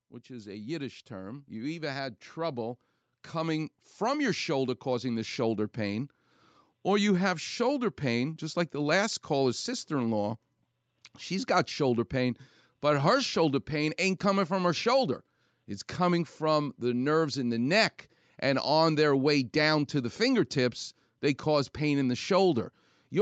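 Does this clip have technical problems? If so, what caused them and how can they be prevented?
Yes. Automatic gain rising occurs from 0.27 to 6.05 s. The gain control judged the input too quiet and lifted it by about 12 dB. Speech and background swell together. Prevent this by setting a proper fixed microphone level before speaking, so the gain control has nothing to correct.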